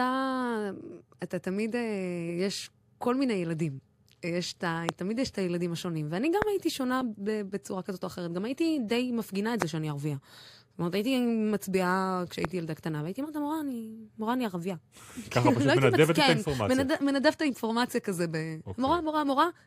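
Speech, interrupted by four loud pops at 4.89, 6.42, 9.62 and 12.45 s, each lasting about 20 ms and standing roughly 20 dB above the voice, the one at 6.42 s nearer 25 dB. The likely cause is a sudden voltage step or pulse, such as static or a connection or driver glitch, entering the chain. The speech continues underneath. On a waveform each is a tall isolated spike; on a spectrogram, a thin vertical line spanning the full frequency range.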